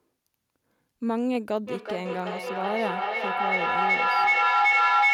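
From 1.67 s to the end of the speech, the clip has feedback echo between two devices. A second device in the room plays back what the first microphone sent, and that microphone picks it up again. The echo canceller only removes what its own device plays, so it misses this path. Each word returns about every 400 ms, thinner and more ringing. The loop gain is high enough that the repeats build rather than decay, peaking about 6 dB above the speech.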